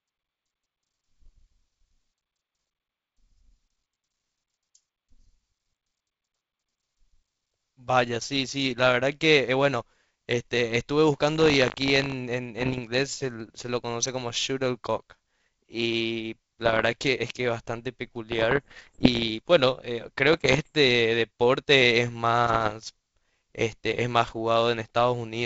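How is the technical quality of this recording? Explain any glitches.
The recording has two kinds of glitch: a short stretch of buffer tearing and several bursts of bit errors on an ADPCM link, heard over a wideband G.722-style telephone path.

From 11.34 to 12.15 s, buffer tearing: the writer and reader of the playback buffer cross each 20 ms period, splicing in a sliver of audio about 70 ms old. The result is a 50 Hz robotic buzz, seen as regular vertical seams in the spectrogram.

At 12.59–12.80, 16.66–16.86, 18.32–19.30, 20.32–20.72 and 22.45–22.73 s, bit errors on an ADPCM link: roughly 0.7–1% of bits flip and the decoder's step size and predictor misbehave briefly. This produces pops and rough bursts, seen as broadband smears and jagged level jumps in the waveform.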